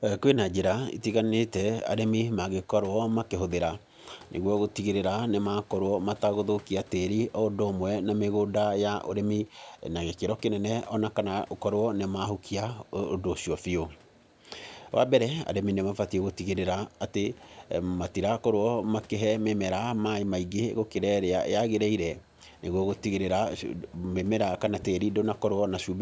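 No faults heard in the speech; it carries the ordinary call microphone processing, which trims the lowest bass and leaves nothing above 8 kHz.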